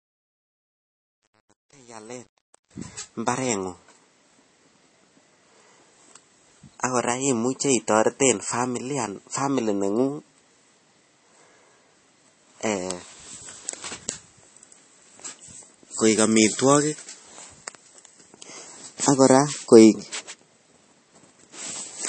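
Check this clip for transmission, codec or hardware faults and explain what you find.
Two problems stand out: a gritty fade-in at the start, and a codec-damaged sound that runs the whole way through.

From 0.0 to 2.71 s, while the speech fades in, you get truncation distortion on a fade, worst up to about 2.54 s. The quietest stretch sounds grainy. That happens when a fade stage keeps too few bits and adds no dither, about 9 here by the sound of it. Low levels get rounded into a few coarse square steps.

Across the whole clip there's nothing above about 8.3 kHz, so the top end sounds dull and boxed in. There's also a watery, swirly texture on the speech, with chirpy metallic edges on the s sounds and smeared consonant attacks. That's likely MP3 compression at a low bitrate, something like 32 kbps. The encoder runs short of bits, chops off the treble at a fixed point, and drops weaker frequency lines that flicker on and off from frame to frame.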